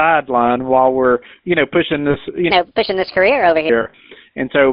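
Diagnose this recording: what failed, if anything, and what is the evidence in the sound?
The whole clip has passed through the GSM full-rate codec. This is a codec-stage fault. The speech is confined to roughly 200 Hz to 3.7 kHz, with nothing above. The damage is plainly audible as a buzzy, gravelly grain. The codec keeps a coarse vocal-tract model and a thinned pulse excitation, which fits the 13 kbps full-rate coder. That thinning is what roughens the voice.

There are lost GSM frames at two points, which points to the network stage. The first runs from 2.10 to 2.16 s, just after "we're you know pushing". The voice freezes into a short metallic ring lasting about 40 ms, which fits two 20 ms frames. The second spans 3.82 to 4.00 s. Here the gaps are scattered over about 160 ms, and the longest run is around 40 ms. Each gap is bridged by repeating the last good frame.

There is also a section at the wrong speed, from 2.51 to 3.69 s. 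That stretch plays 1.34 times too fast. Pitch and tempo rise together, about five semitones higher, so the voice turns high and hurried. It drops back to normal at 3.69 s. The likely cause is a playback or editing stage running that segment against the wrong clock. Because speed and pitch move in lockstep, this is resampling, not time-stretching.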